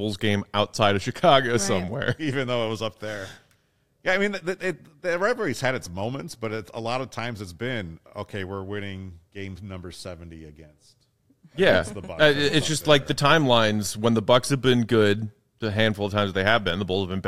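No technical faults can be heard anywhere in the speech recording; the signal stays intact and steady throughout.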